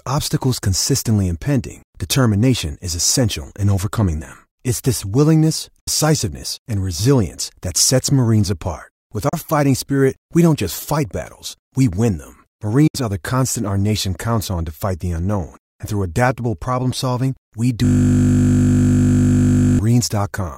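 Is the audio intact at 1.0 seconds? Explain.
Yes, the audio is intact at 1.0 seconds, with no audible fault at that moment.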